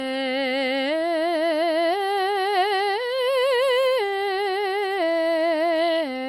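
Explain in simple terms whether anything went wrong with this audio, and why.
The music sounds swirly, smeared and hollow from start to finish, with blurred attacks and nothing above 16.4 kHz. This is generation loss: the audio was likely saved in a lossy format such as MP3 around five times, each pass adding fresh damage.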